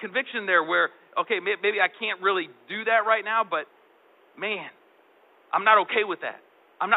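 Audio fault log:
No fault is found in this audio.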